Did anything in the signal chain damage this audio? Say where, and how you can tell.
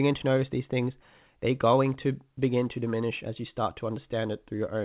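No, nothing in the chain damaged this speech; the band stops at 4 kHz with the usual coding noise you'd expect from a normally working call path, which fits narrowband G.711 mu-law at 64 kbps.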